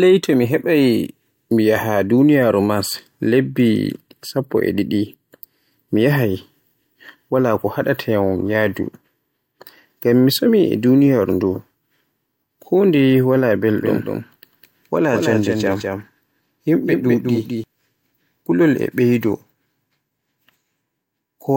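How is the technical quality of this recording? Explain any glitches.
There's one glitch here, a doubled audio track running from about 13.8 s to 17.6 s. During that stretch the speech is joined by a second full-band copy trailing roughly 200 ms behind, sitting around 5 dB quieter. It's dry, with no reverb tail or room colour, and it cuts in and out abruptly at those edges. The likely cause is the audio being captured twice, once through a slower path, or an edit leaving two copies out of step.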